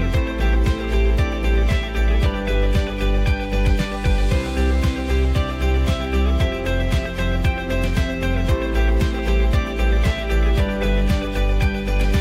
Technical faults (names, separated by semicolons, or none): none